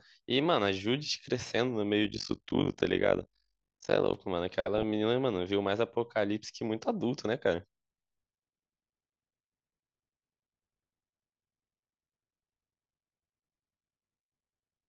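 From 2.05 to 4.16 s the speech carries overlap-add ripple: frames were rejoined with overlaps that don't sum to constant gain, so level swings by about 60 dB roughly 50 times a second. Unlike ordinary tremolo, it's a harsh, robotic flutter locked to the frame rate.

At 4.76 to 4.83 s and again at 6.53 to 6.56 s, DAB burbling appears. Bit errors of a small fraction of a percent slipped past correction, putting short blips of noise into individual sub-bands. Unlike the steady ripple, these are brief, irregular bursts of burbling noise.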